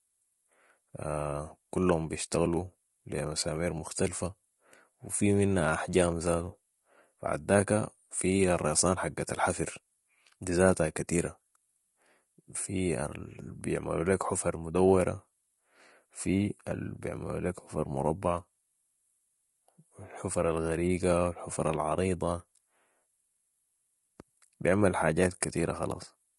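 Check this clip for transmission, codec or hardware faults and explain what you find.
There's one fault, and it runs the whole way through: low-delay AAC compression. The speech sounds rough and grainy, with noise filling the gaps between pitch harmonics and a synthetic-sounding top band. That's likely AAC-ELD coding. Its short frames resolve harmonics poorly and eat bits, and the damage is plain enough to fit a low rate of around 32 kbps.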